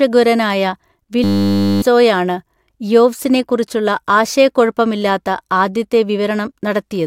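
At 1.24 s the speech gives way to a system hang loop that runs until 1.82 s. The machine or its audio driver stalled, but the sound hardware kept replaying the same 10 ms slice of its ring buffer, about 58 times in a row. Because the loop is so short, it repeats 100 times a second and comes across as a steady 100 Hz buzz rather than a stutter. Roughly half a second of real audio is lost underneath it.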